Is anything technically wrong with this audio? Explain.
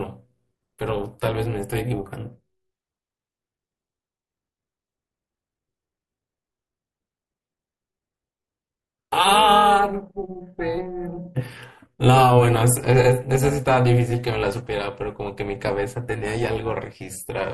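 Yes. Throughout the speech there is overlap-add ripple: frames were rejoined with overlapping windows that don't sum evenly, so the level dips by about 11 dB once per frame, roughly 400 times a second. Unlike hum, it modulates the speech itself, adding a rough, robotic buzz, and it drops out with the sound in pauses.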